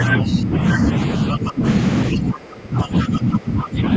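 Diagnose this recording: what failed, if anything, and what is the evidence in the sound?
Call processing failed: the echo canceller likely could not separate the near talker from loudspeaker echo and turned both down. Speech suppressed in double talk dips at 0.19 to 0.81 s, 1.34 to 1.65 s, and 2.13 s onward, by about 10, 15 and 20 dB.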